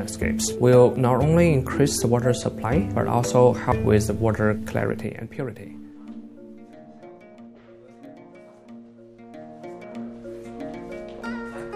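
At 0.96 s, 2.64 s and 3.72 s the audio lurches forward, with a short stretch of roughly 40 ms simply missing and the two sides butted together. These are most likely dropped buffers from an overrun, where the capture side fell behind and the hardware overwrote samples before they were collected. Unlike a dropout, no silence fills the gap. The sound skips ahead.

From 4.74 s to 5.32 s the level falls by about 10 dB, and a fine ticking rides on top of the sound while it moves. This is zipper noise. The gain is updated in discrete jumps, about 50 per second, rather than being interpolated, so each jump puts a tiny step in the waveform. It differs from the dropped buffers because no audio is lost: the rapid ticks occur only while the level is changing.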